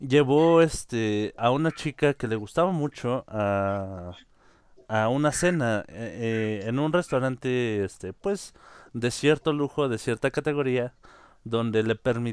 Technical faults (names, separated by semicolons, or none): none